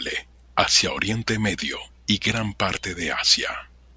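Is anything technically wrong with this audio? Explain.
No, nothing technically wrong jumps out here; this short bit of speech sounds perfectly fine to me.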